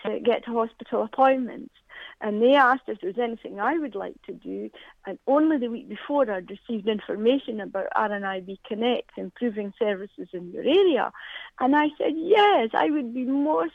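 No dropouts, clicks, distortion or other technical faults turn up anywhere in the recording.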